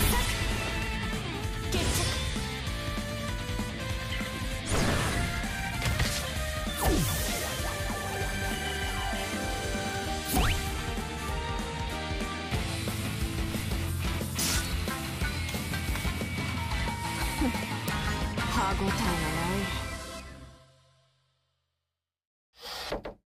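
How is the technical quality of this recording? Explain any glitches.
Two glitches stand out, both bit error spikes: isolated ticks at 8.14 s and 17.88 s. A flipped bit in a stored or transmitted sample makes its value jump by a power of two and return immediately. The first tick peaks at about -18 dBFS; the second is louder, at about -6 dBFS, and its sound fits an error spanning two adjacent samples. Unlike a buffer dropout or edit click, there's no gap, and the ticks bear no relation to the surrounding audio.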